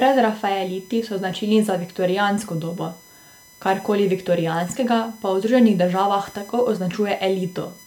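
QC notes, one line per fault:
Throughout, USB whine: a steady, fixed-pitch whine sits under the speech for the whole clip, built on a 1 kHz tone with its strongest component at the sixth harmonic, 6 kHz, roughly 30 dB below the speech. The USB bus pulls current in bursts every 1 ms frame. That periodic draw leaks into the audio through shared power or ground, so the pitch never moves and its harmonic series lines up on 1 kHz multiples.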